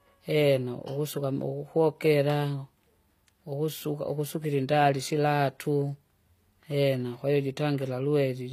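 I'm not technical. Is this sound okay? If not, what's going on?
No. Throughout the speech the hiss of s sounds comes out gritty and metallic, almost lispy, and nothing at all is heard above 15.5 kHz. The likely cause is HE-AAC compression, which keeps only the lower part of the sound and rebuilds the treble by copying it upward. Simple filtering would make the voice dull. Here the top stays bright but sounds artificial, because that treble is a copy, not the original.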